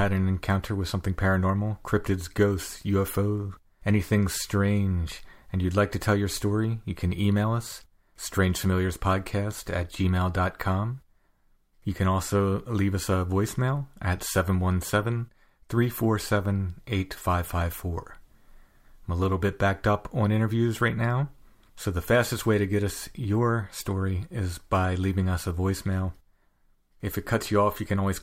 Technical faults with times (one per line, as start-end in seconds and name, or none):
none